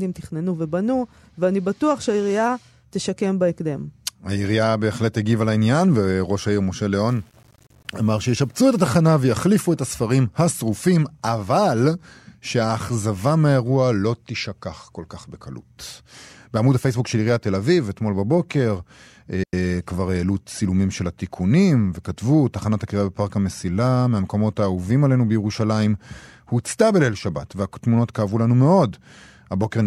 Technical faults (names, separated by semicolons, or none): low bit depth without dither; digital wireless dropout